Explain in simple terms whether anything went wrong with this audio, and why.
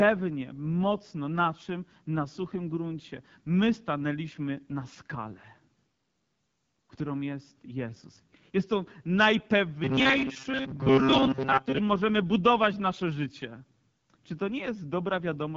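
Two problems. Throughout, the AMR wideband (HD Voice) codec runs at a low setting, making the speech rough and raspy, with nothing above 7.6 kHz.

From 9.84 to 11.78 s, just before "możemy budować nasze życie", there is robotic sound from repeated short buffers: a rigid metallic buzz near 134 Hz, likely from about 7.5 ms chunks replayed over most of that stretch.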